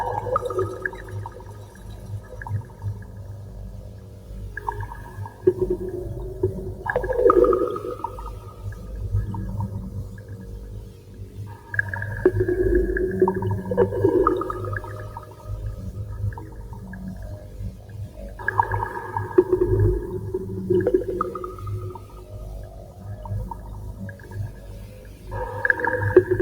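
A noise suppressor built for speech was left running on material it was not designed for, so it keeps treating sustained parts of the sound as noise. Its gain rides up and down by something like 15 dB across the clip, so held tones and ambience duck and recover while sharper onsets pass. The result is an audible pumping and thinning that runs from start to finish.

At specific moments the noise suppressor cuts the sound, pulling steady or decaying material down harder than the surrounding audio. The longest stretch runs from 0.68 to 5.46 s, with about 6 dB of loss over roughly four seconds of it. Shorter cuts follow at 8.44 to 8.6 s and 10.1 to 11.72 s, then 15.24 to 15.45 s, 16.4 to 16.83 s, 17.4 to 18.17 s, 21.97 to 23.05 s and 23.93 to 25.26 s. Each dips by about 5 to 6 dB, and tails sink audibly there.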